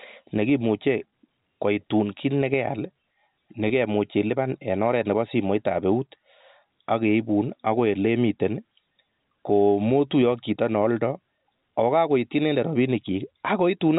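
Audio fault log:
1.10–1.12 s and 3.68–3.70 s, packet loss with pitch repetition: each time the speech briefly freezes into a slightly held, buzzy tone for about 20 ms before it moves on. A 20 ms gap points to a single lost packet. The receiver filled each gap by repeating the last pitch period of the speech, so the same waveform cycle loops for that moment. The telephone-band G.711 coding around it adds at most faint damage at these points.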